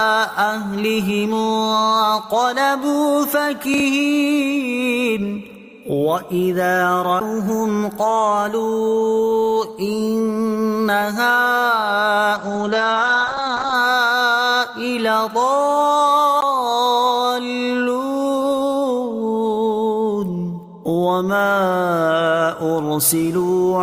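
At 3.74 to 3.80 s, chunks out of order: a 20 ms block arrived two chunks late and plays after its successors, giving a brief jumbled flicker. At 7.20 s, a CD skip: the laser jumped tracks, so the player mutes for around ten milliseconds and resumes elsewhere, heard as a tick and a sudden jump. From 12.38 to 13.80 s, a call bitrate drop: the encoder was cut from 48 to 10 kbps and bandwidth from 20 kHz to 8 kHz, so for about 1.35 s the sound turns muffled and watery, losing its top end. At 16.41 s, a second CD skip mutes for roughly fifteen milliseconds before the same tick and jump.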